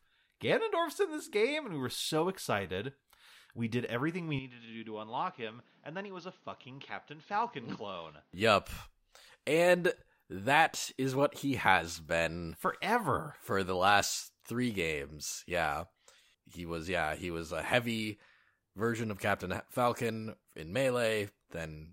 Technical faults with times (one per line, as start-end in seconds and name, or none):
4.39-8.33 input switched to a poorer device